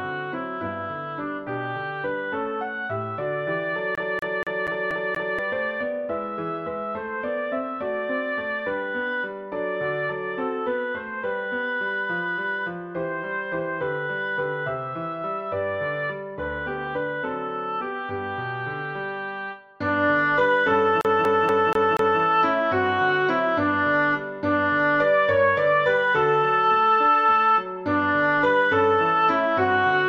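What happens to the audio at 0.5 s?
Nothing goes wrong at 0.5 s: the audio plays through that moment intact, with no dropout, click, distortion or other fault.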